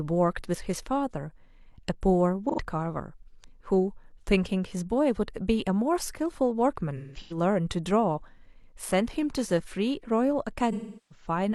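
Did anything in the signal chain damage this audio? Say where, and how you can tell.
Yes. The damage sits between the network and the codec stage: AAC frame loss with concealment. At 2.49 to 2.60 s a smeared, noisy patch of about 85 ms fits two lost frames. From 6.96 to 7.37 s the speech turns phasey in scattered gaps, the longest about 150 ms. From 10.72 to 11.27 s most of the loss is one long run. The decoder stretches the last good spectrum, fades toward silence, then fades back in.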